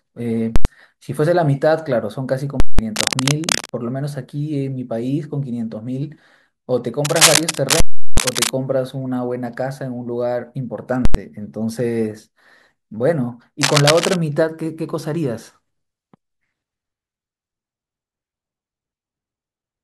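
Right at 0.56 s there's a hard blast of invalid numbers at full scale. Something in the processing produced infinite or invalid values, and they got pinned to the largest possible sample value for a whole block. You hear a huge pop going in, dead silence for about 93 ms, then another pop coming out. That length fits a 4096-sample block.

It happens again at 2.60 s. This time it's about 186 ms, which fits an 8192-sample block.

Straight after, from 2.91 to 3.79 s, there's cable scratch noise. Dense, ragged bursts of scratchy rustle sit roughly level with the speech. It's likely a worn cable, connector or control being moved, so its contact resistance jumps around.

A louder scratch stretch runs from 7.05 to 8.50 s, a bit above the speech. Right in the middle of it, at 7.80 s, the longest full-scale block hits, lasting about 372 ms, consistent with a 16384-sample block. So you get pop, silence, pop surrounded by the rustle.

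Another short full-scale hit comes at 11.05 s, about 93 ms long.

The last bit of scratching runs from 13.62 to 14.16 s, again at about the same level as the speech.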